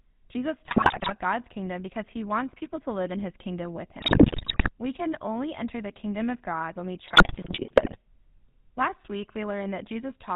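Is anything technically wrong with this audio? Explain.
Yes. Throughout, the GSM full-rate codec, consistent with the 13 kbps scheme, discards high-frequency content and rebuilds speech from a coarse pulse excitation, giving clearly buzzy, gravelly speech with nothing above 4 kHz. GSM bit errors from a weak link corrupt the decoder's filter, pitch and gain values at 0.66–1.13 s, at 4.0–4.70 s just after "in his kingdom with", and at 7.06–7.97 s just after "when we", so the speech breaks into squawks, pops and gargling. The middle burst has the highest bit error rate, about 11%.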